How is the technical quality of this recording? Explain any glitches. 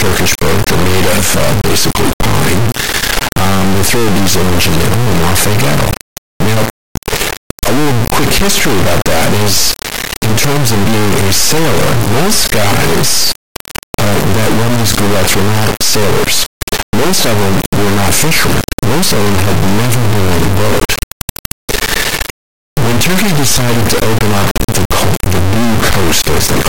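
Very poor: for the entire clip the speech is replaced by an extremely loud, harsh buzz that slams between silence and the clipping limit, dropping out to nothing in the quietest stretches. This is an integer read as float fault: 32-bit integer samples interpreted as 32-bit floats become tiny, invalid or enormous values, producing that square-wave roar.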